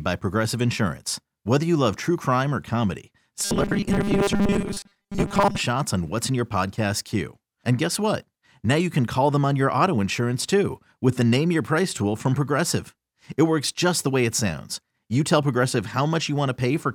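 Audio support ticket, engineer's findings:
Robotic sound from repeated short buffers, 3.39–5.61 s, after "true crime or comedy": buzz, likely 5 ms buffer looped; spectrogram: flat 200 Hz harmonic comb.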